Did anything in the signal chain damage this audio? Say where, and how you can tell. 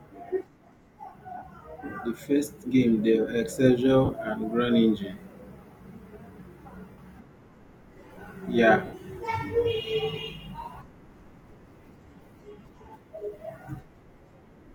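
Yes, lost LE Audio frames on the Bluetooth wireless link, at 1.37–1.42, 4.05–4.13, 6.91–6.98, 8.86–8.93 and 12.62–12.65 s. Each spans 30 to 70 ms, in steps that fit 10 ms LC3 frames; at 4.05 s the losses scatter over 80 ms, the longest run about 40 ms. The speech turns into a hissy, pitchless smear, because the decoder reuses the last spectrum with random signs and fades it. Plain dropouts would leave hard silence or clicks instead.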